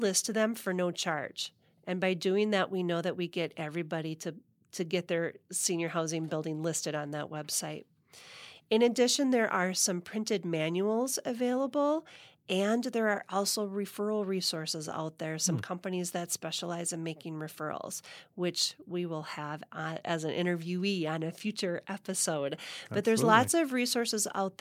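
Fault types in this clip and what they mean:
Nothing in this speech recording stands out as a technical fault, so there's nothing to list here.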